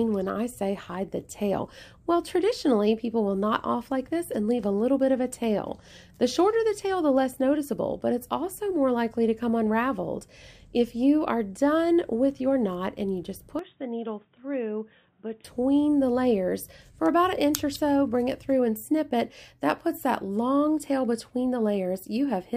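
From 13.59 to 15.45 s the sound abruptly turns dull and boxy, nothing above 3.8 kHz, about 10 dB quieter, with a faint new noise floor, then clears. The input likely switched to a poorer device. A spectrogram shows the upper band cut off; the waveform visibly shrinks.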